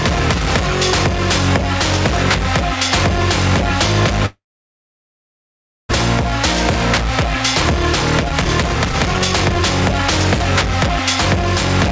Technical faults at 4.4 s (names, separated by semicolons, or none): gain pumping; long network dropout